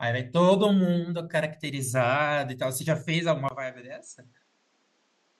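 At 3.49 s the speech turns duller and noticeably quieter, roughly 10 dB down, after a brief 20 ms gap, with nothing above 8.3 kHz and a faint new background noise until the end. This is likely an input switched to a poorer device.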